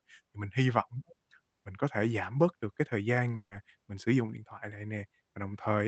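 Just after "bớt được cái thời", from 3.35 to 3.53 s, the speech smears into a fading buzz for 160 ms, then a 50 ms silence, before "mình sử dụng điện" resumes with 160 ms missing. This is likely a long network dropout.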